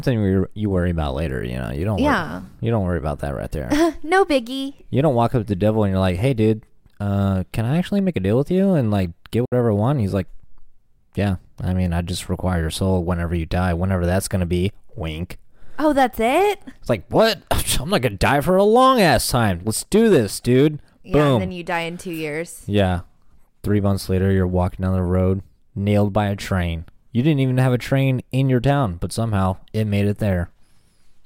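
At 9.45 s, after "you and like get", a digital broadcast dropout cuts 64 ms, fitting two lost frames: an abrupt flat gap in the waveform.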